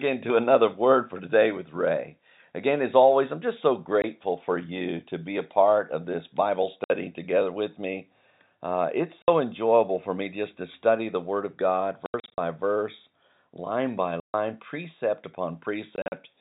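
A speech recording over a telephone-band channel, chopped by abrupt silent holes with hard edges: a brief dropout at 4.02 s, 60 ms gaps at 6.84 to 6.90 s before "together with me" and at 9.22 to 9.28 s before "enjoyable for me just", a stuttering cluster at 12.06 to 12.38 s, a 140 ms hole at 14.20 to 14.34 s after "verse line by", and another cluster at 15.96 to 16.12 s. This is packet loss filled with silence. Every gap is a multiple of 20 ms, which fits 20 ms packets, and the receiver simply muted each missing one.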